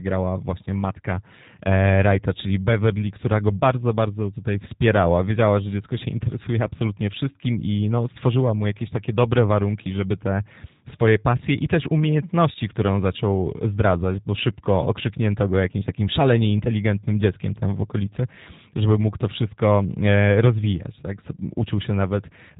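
Throughout, the speech shows G.729 codec damage: rebuilt by a low-rate predictive model, dull above 3.8 kHz, plainly rough and synthetic, fitting 8 kbit/s.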